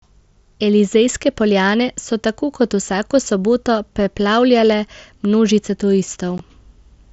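A brief hole with hard, abrupt edges cuts the speech at 6.38 s: unconcealed Bluetooth headset packet loss, where about 15 ms of headset audio went missing and silence or an idle pattern filled the gap.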